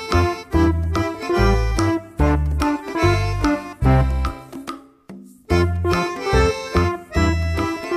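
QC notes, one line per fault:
No faults found.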